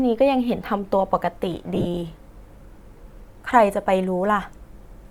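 Speech, with lost LE Audio frames between 1.74 and 1.86 s. About 82.5 ms of audio goes missing in short gaps scattered across roughly 105 ms, which fits around eleven 7.5 ms LC3 frames. The longest unbroken gap is around 30 ms. In each gap the decoder repeats the last spectrum with random signs, so the voice smears into a brief noisy buzz rather than cutting to silence. That separates it from a hard dropout or a clicky splice. No gap lasts long enough for the concealment to fade out completely. The light coding underneath stays faint.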